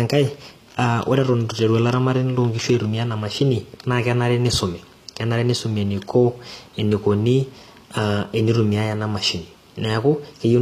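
From start to finish the speech carries plainly audible damage of the kind HE-AAC compression leaves, likely from encoding at a low rate, around 24 kbps. The treble stays bright but is rebuilt from copied lower bands rather than the original, so s sounds come out gritty and metallic. On a spectrogram the upper region shows repeated, smeared blocks above a sharp crossover, with harmonics that fail to line up across it.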